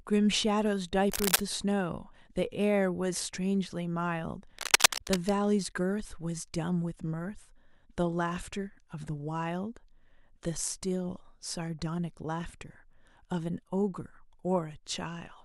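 At 1.10 to 1.41 s a burst of dense, uneven crackling sits over the speech at roughly the same level as the voice. A second, longer burst follows from 4.58 to 5.30 s, somewhat louder than the speech. Both are likely cable scratch noise: a worn lead, connector or control being disturbed, so its contact resistance jumps rapidly and injects ragged noise. Each is heard as a brief scratching rustle over the talker.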